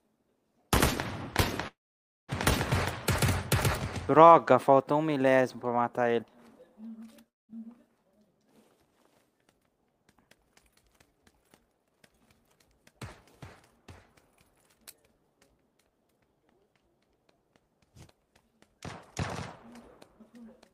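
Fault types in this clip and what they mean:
call audio freeze: From 1.67 to 2.30 s the sound stops and a gap of about 0.61 s is inserted, almost all of it silent. The last sound trails off briefly first. Playback then resumes where it left off, with nothing missing. Held-up packets and an empty jitter buffer are the likely cause.
skip ahead: At 2.70 to 2.73 s playback jumps forward. Roughly 0.2 s of audio is simply absent, and the two sides are joined almost directly with only a tiny fill. A stretch of audio was dropped while later audio was already waiting, so the listener never hears that stretch.
jitter buffer slow-down: From 4.11 to 6.09 s the audio plays at about 90% speed with unchanged pitch. The receiver repeated short pieces, many times in a row, adding about 0.2 s in total. This builds up a reserve in the buffer, so sounds come out drawn out.
long network dropout: From 7.29 to 7.50 s the audio cuts out. 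There is a brief fading tail, then about 0.19 s of silence. When sound returns, about 0.2 s has been lost for good. The likely cause is a stretch where no audio arrived at all.
jitter buffer speed-up: From 8.69 to 10.99 s the audio runs at about 113% speed at the same pitch, with roughly 0.3 s removed. From 15.89 to 16.21 s it runs at about 109%, with a few hundredths of a second removed. Both come from an overfull buffer trimming short pieces.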